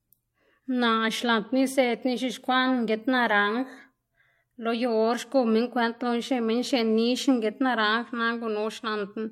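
No technical faults can be heard anywhere in the recording; the signal stays intact and steady for its whole duration.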